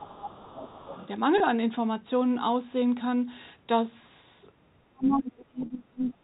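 Telephone-band speech, about 6 s long, with the top end stopping at 4 kHz as you'd expect from G.711 coding, and three kinds of trouble on top of it. From the start to 0.99 s, and again from 4.84 s to the end, the talker's level dips and chops, by roughly 20 dB at worst in the first stretch and roughly 35 dB in the second, adding up to somewhere around 0.7 s and 1.5 s of affected audio. That's likely speech suppressed in double talk: the echo canceller couldn't tell the local talker from the loudspeaker echo and turned both down. Overlapping that, from 0.56 to 1.08 s you can hear the other side's voice leaking through at roughly 20 dB under the talker, plus a brief scrap at 5.40 to 5.45 s around 30 dB down, likely the canceller not fully scrubbing the loudspeaker sound out of the mic. Then there's packet loss with pitch repetition at 1.38 to 1.40 s, a 20 ms gap that fits one lost packet, and at 5.66 to 5.70 s, a 40 ms gap that fits two. 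In both spots the receiver covered the hole by looping the last pitch period, so you get a short held buzz instead of a gap.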